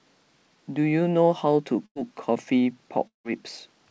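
Burst of packet loss, 1.86 to 1.97 s: a short run of audio packets failed to arrive in time to be played. The receiver covered the gap by repeating and fading the last sound it had for about 94 ms, so the speech briefly turns into a smeared, dimming continuation instead of moving on. When the signal returns, roughly 100 ms of speech has been skipped, leaving a small jump in the flow of the sentence.

Long network dropout, 3.07 to 3.26 s: here the stream goes quiet for longer, most likely because the connection stopped delivering audio for a stretch. The receiver again extends the last sound, stretching and fading it for about 170 ms, and the extension dies away to near silence, with about 130 ms of that stretch heard as silence. Around 180 ms of speech is lost, and the audio picks up again after the missing section. On this G.722 call path, even the speech around both gaps has nothing above 8 kHz.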